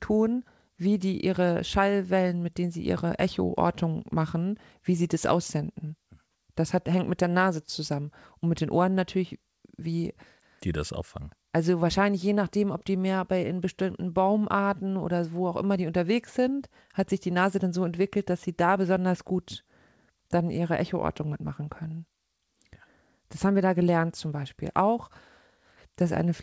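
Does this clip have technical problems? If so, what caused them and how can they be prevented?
No, nothing in this speech recording needs fixing.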